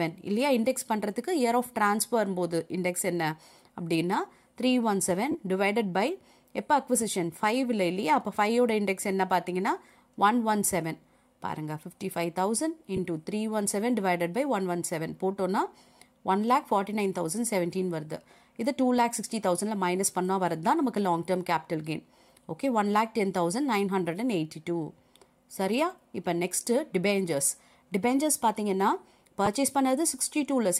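At 5.31 to 5.35 s, then 12.96 to 12.99 s and 29.46 to 29.48 s, lost LE Audio frames leave gaps of 30 ms and 15 ms, which fits 7.5 ms frames. The decoder fills each gap by replaying the last spectrum with scrambled phase, so the sound smears briefly into a noisy blur. A plain dropout would leave a hard silent gap or click instead. The light lossy compression underneath stays faint throughout.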